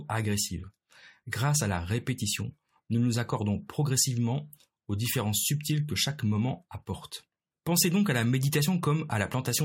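Nothing here trips up the ear: the speech runs along without any dropouts, clicks, glitches or other technical hiccups worth pointing out.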